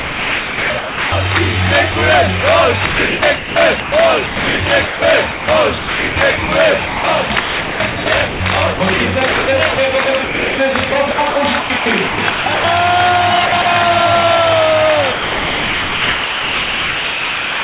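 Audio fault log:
0.00–1.12 s, sound chopped by the voice detector: the start keeps cutting in and out, with about 1.04 s of that stretch swapped for comfort noise. That's likely the sender's voice detector flipping between sending and muting.
1.92–1.94 s, sound dropped by the voice detector: a 20 ms bite goes missing and is filled with comfort noise, likely because the detector briefly read the sound as background.
2.86–12.64 s, sound chopped by the voice detector: the longest choppy run, with about 3.84 s of the sound replaced in scattered pieces by comfort noise. The gating likely comes from the same detector.
13.46–13.66 s, sound chopped by the voice detector: a short flutter, with about 0.1 s swapped out, likely from the detector toggling again.
15.12 s to the end, sound dropped by the voice detector: the last 2.52 s give way to steady comfort noise, likely because the detector decided everything there was background. 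The synthetic fill is band-limited like the rest of the G.711 call, with nothing above 4 kHz.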